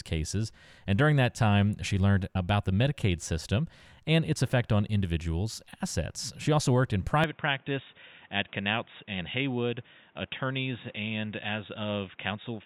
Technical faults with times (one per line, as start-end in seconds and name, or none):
7.24-12.65 input switched to a poorer device